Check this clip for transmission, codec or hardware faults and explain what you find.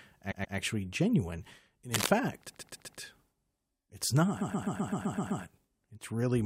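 There are two kinds of fault, three stutters and one scratch.

Repeated frames at 0.31 to 0.56 s, 2.48 to 3.00 s and 4.40 to 5.43 s: the speech stutters, replaying a 128 ms chunk two, four and then eight extra times. A run of compressed frames was sent again, adding 256 ms, 512 ms and about 1 s.

Cable scratch noise at 1.94 to 2.10 s: dense, uneven rustling, about as loud as the speech, likely from a worn cable or connector being moved.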